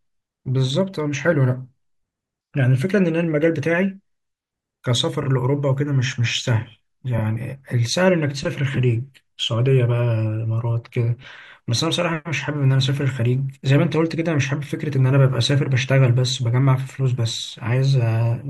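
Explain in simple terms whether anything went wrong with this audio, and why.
Repeated frames at 5.23 s and 7.18 s: a 32 ms slice of speech plays twice, which fits one compressed frame being duplicated, causing a brief stutter.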